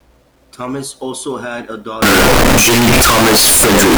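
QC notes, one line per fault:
2.02 s to end: signed and unsigned mixed up. From this point the speech turns into loud, harsh, buzzing distortion, and soft sounds become as loud as strong ones. The likely cause is samples being read with the wrong signedness, which flips the top bit so that every zero crossing jumps across the full range. This fits 8-bit samples.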